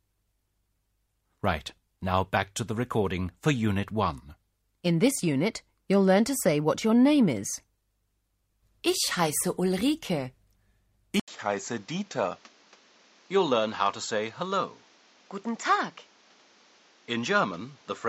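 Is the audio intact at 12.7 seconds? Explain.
No. From 11.2 s to the end, the input seems switched to a poorer device. After an 80 ms gap, sound turns duller, nothing above 7.6 kHz, about 5 dB quieter, with new faint noise.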